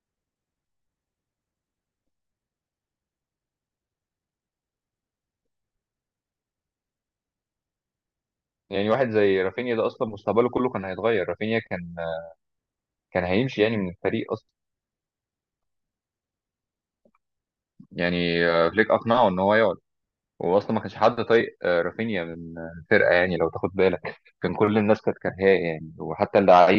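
Nothing is technically wrong with this speech recording.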